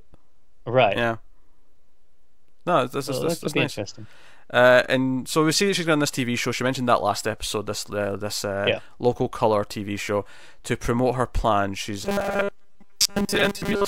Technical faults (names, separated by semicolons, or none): robotic sound from repeated short buffers